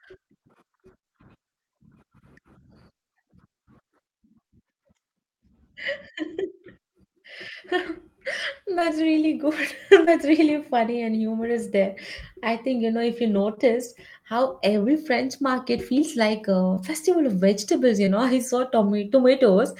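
Short concealed packet loss hits this speech at 6.35–6.39, 8.79–8.83, 10.05–10.08, 13.55–13.59, 16.75–16.79 and 18.05–18.09 s. Each time, about 20 ms of audio arrived too late and was patched by extending the preceding sound, leaving a brief smear or wobble.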